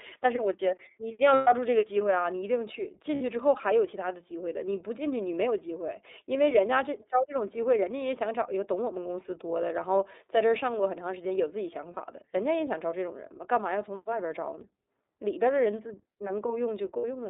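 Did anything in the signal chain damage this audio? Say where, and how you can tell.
Yes. At the codec stage, the speech is carried by the iLBC codec throughout, and the damage is plainly audible. Content is confined to a line band of roughly 300 Hz to 3.7 kHz, so a spectrogram shows a hard ceiling near 3.7 kHz and an empty floor below 300 Hz. Because each 30 ms block of excitation is coded on its own, the voice sounds slightly rough and synthetic, which fits the 13.33 kbps mode.

At the network stage, lost iLBC frames cause four short dropouts: 1.34 to 1.48 s (120 ms), 3.15 to 3.21 s (60 ms), 11.94 to 11.98 s (30 ms) and 16.97 to 17.04 s (60 ms). Their lengths fit whole 30 ms frames going missing. The decoder fills each gap by repeating the last pitch cycle mixed with noise, so it sounds like a held, faintly buzzy vowel. On a spectrogram, that shows as flat, repeated harmonic stripes that fade across the longest gap. 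The speech recovers almost immediately afterward.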